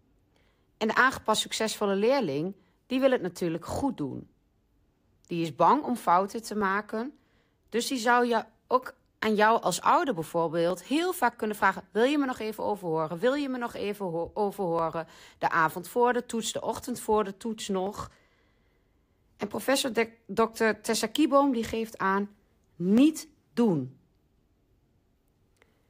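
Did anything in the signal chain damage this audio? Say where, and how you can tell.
Yes, periodic USB or driver dropouts: little ticks every 1.02 s from 0.48 to 25.02 s, each skipping roughly half a millisecond of speech.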